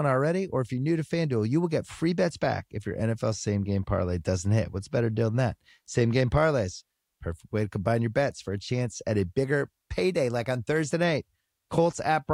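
A speech recording with nothing technically wrong to report.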